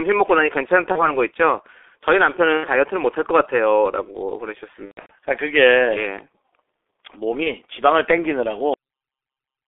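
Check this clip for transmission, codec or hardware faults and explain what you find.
Three kinds of fault are present in this speech.

The G.723.1 codec runs throughout, with heavy damage. The band is held to roughly 300 Hz to 3.5 kHz, and the coarse coding fits a 6.3 kbit/s rate. The voice model updates only every 30 ms. So the speech sounds muffled and hoarse, and consonants smear.

VoIP packet loss concealed by the speech codec occurs four times: 0.92 to 1.11 s, 2.57 to 2.69 s, 4.85 to 5.12 s, and 7.43 to 7.52 s. The decoder fills missing frames by repeating its last pitch and filter at falling gain. The sound turns into a buzzy tone or coloured noise and fades, then stays weak for a while. The 4.85 s event is worst. It points to about 210 ms of scattered loss, including one run of about 120 ms.

A cut-off end occurs at 8.74 s. The final buffers never reached playback. The audio stops mid-sound and drops straight to digital silence, with no natural decay.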